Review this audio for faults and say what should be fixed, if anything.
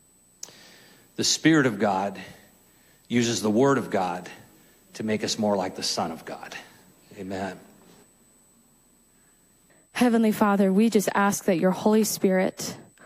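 There's USB whine running the whole way through: a steady, fixed-pitch tone at 8 kHz, strongest at its 16 kHz harmonic, sitting roughly 35 dB under the sound. That's the bus's 125-microsecond microframe current draw leaking in through power or ground. To prevent it, use a powered, isolated hub or a ground-loop isolator.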